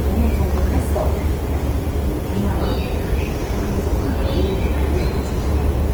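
From start to finish the recording carries plainly audible Opus compression damage, likely from its music (CELT) mode at a low rate, roughly what 16 kbps would give. Rather than leaving gaps, the encoder keeps each band's energy and patches starved bands with folded or noise-like content, so tonal parts turn grainy, rough and hissy instead of swirling. A spectrogram shows full bandwidth reaching about 20.2 kHz, with upper bands filled by smeared, speckled texture instead of clean partials.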